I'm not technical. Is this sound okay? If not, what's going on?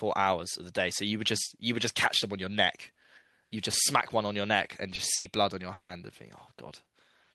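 No, there are three small hiccups close together, all from the call's connection.

Around 4.95 s there's a short concealed packet loss: about 20 ms of speech never arrived, so the receiving end patched it by stretching the sound just before. You'd hear a tiny smear or wobble there.

From 5.15 to 5.27 s there's a burst of packet loss, roughly 100 ms gone in one go. The patch covers the whole gap without going silent, so it comes across as a brief held buzz or fading hiss, and then the speech jumps ahead.

Then from 5.73 to 5.91 s about 160 ms of speech is replaced by a stretched, fading continuation of the previous sound before things pick up again further on. That's likely a long network dropout, where nothing came through for a moment and the missing bit is simply lost.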